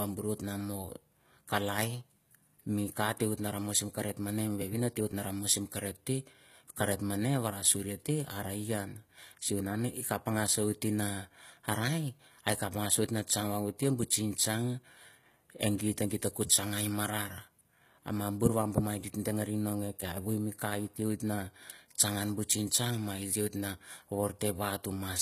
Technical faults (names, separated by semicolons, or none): HE-AAC compression